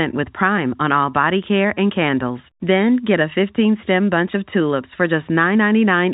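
Nothing stood out on listening to this speech, which comes through the narrow telephone band with nothing above about 3.8 kHz.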